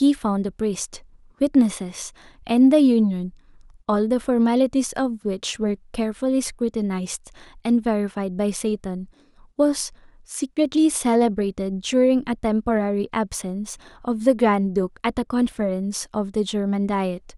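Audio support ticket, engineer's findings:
Crude rate conversion, 12.08 to 15.64 s. Gritty, inharmonic fizz riding the louder, brighter bits of speech, faint but there, roughly 40 dB under. Looks like a linear-interpolation resampler with no filtering, which fits a 44.1 kHz to 48 kHz step.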